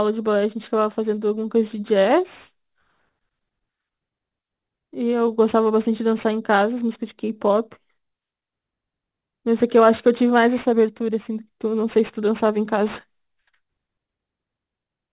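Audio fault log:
Throughout, aliasing: the speech was taken down to an 8 kHz rate without an anti-alias filter first, so everything above the 4 kHz fold point reflects back into the band as false, unrelated tones. The folded energy sits roughly 25 dB below the speech, enough to make sibilants gritty and metallic, and the spectrum stays full right up to the 4 kHz edge instead of rolling off before it.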